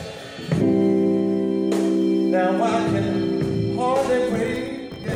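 Filter restarted on every block, from 4.0 s to the end: the filter discards its internal state at each block boundary and starts again from silence, so each block opens with a small transient. These repeat as a 50 Hz buzz, which suggests 20 ms blocks, and the buzz rises and falls with the level of the sound.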